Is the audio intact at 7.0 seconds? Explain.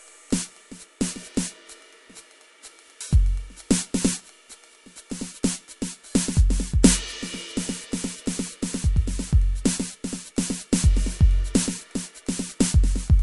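No. At 7.0 seconds, as across the whole clip, the music carries damage from what is likely MP3 compression at a low rate, which fits roughly 48 kbps. Starved of bits, the encoder chops away all treble above about 11.3 kHz and drops quieter frequency lines that flicker in and out between frames. The result is plainly audible: a dull top end, a watery, swirling texture, and smeared attacks.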